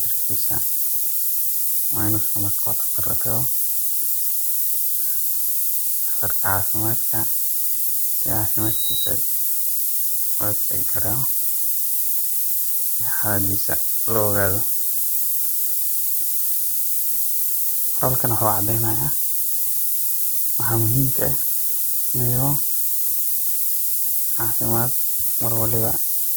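From start to finish, the speech carries a steady, thin hiss that climbs sharply toward the top of the band. This is low bit depth with noise shaping. The grain fits about 4 bits. The rounding error is pushed upward, leaving noise roughly 5 dB louder than the speech.

Throughout, the speech also sounds rough, grainy and noisy in its tones, with full bandwidth kept. The likely cause is Opus compression in its music mode. Bits are scarce, consistent with roughly 24 kbps. So bands are filled with folded or noise content.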